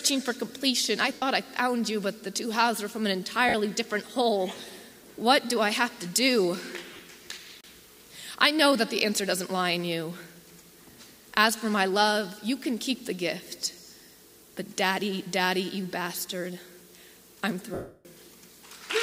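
Brief noisy smears replace the sound at 1.13 to 1.22 s, 3.49 to 3.54 s, in short patchy bursts from 6.91 to 6.99 s, and in a 310 ms gap from 17.74 to 18.05 s that fades toward silence. These are lost LE Audio frames, which the LC3 decoder filled with the last spectrum, given random signs and faded.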